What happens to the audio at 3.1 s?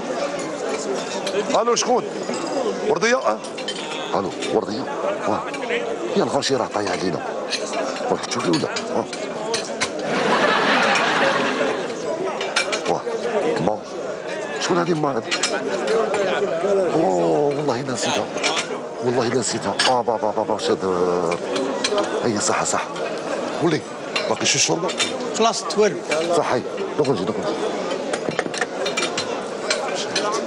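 At 3.1 s there is a fast, regular ticking, about twenty per second, that forms a rattle. These are clock slip clicks, running from 0.11 s to 30.45 s, likely from two unsynchronised clocks about 500 ppm apart, forcing a single-sample drop or repeat each time.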